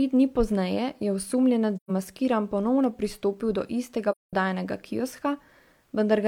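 A speech recording with two soft-edged silences: at 1.76 to 1.91 s, right after "dni pozneje je osumljenec", the sound fades out and back in over about 130 ms, and at 4.11 to 4.33 s, after "pristopil do istega", a longer gap of about 210 ms follows. These are AAC frame loss with muting. The decoder zeroed the missing frames' spectrum, and the overlapping windows smeared the edges, which fits three and five lost frames. At 2.84 s, just before "pristopil do istega", a sharp snap sits on top of the speech. This is an electrical switching spike, likely a nearby switch or discharge arcing into the audio line.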